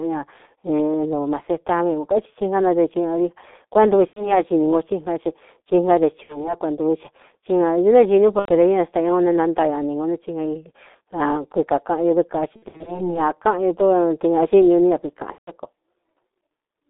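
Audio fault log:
throughout: G.723.1 codec, heavy damage at 6.3 kbit/s; a 250 Hz to 3.7 kHz band and slow 30 ms frame-by-frame voice modelling leave speech muffled and hoarse, with smeared consonants.
4.07–4.42 s, 6.23–6.57 s, 8.39–8.49 s, 12.56–13.16 s, 15.32–15.51 s: VoIP packet loss concealed by the speech codec. The decoder filled 60 to 180 ms of missing audio by extending its last pitch and filter at falling gain, giving buzzy or noisy fading stretches and weak speech afterwards.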